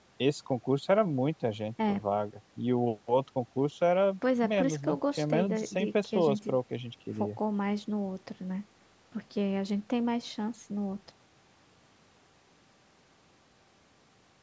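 Nothing stood out on listening to this speech, which has been through call microphone processing that trims the lowest bass and leaves nothing above 8 kHz.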